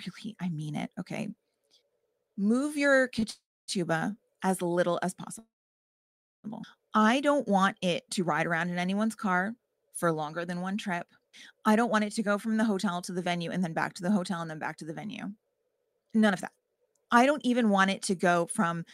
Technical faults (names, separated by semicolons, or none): short stall from a late packet; call audio freeze; jitter buffer speed-up